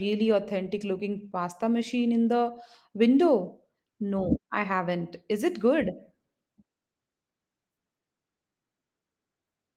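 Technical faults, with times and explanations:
No technical faults detected anywhere in the speech recording.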